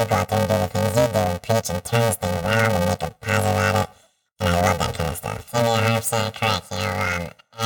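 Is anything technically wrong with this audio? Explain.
Yes, there's a problem running through the whole speech clip: planar audio read as interleaved. Each block holds all of one channel followed by the other, but playback treats it as alternating left-right pairs, so every block plays twice at double speed. The blocks here are very short, around 2.9 ms, which fits a 128-sample block. That gives a robotic buzz at about 345 Hz across everything, rather than a clear octave jump.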